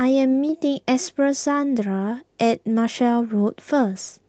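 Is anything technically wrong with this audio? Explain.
No, nothing is technically wrong.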